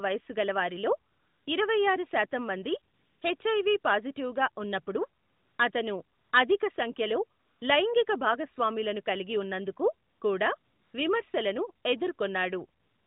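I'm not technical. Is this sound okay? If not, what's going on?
No. In the pauses, the real background vanishes and a smooth, steady hiss switches in. This happens nine times between about 1.1 s and the end, each for at most about 0.4 seconds. This is AMR comfort noise. The phone decided nobody was talking and stopped sending sound, so the receiver filled the gap with substitute noise.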